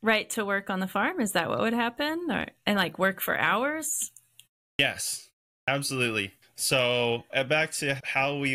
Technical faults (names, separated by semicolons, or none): clipped start after a pause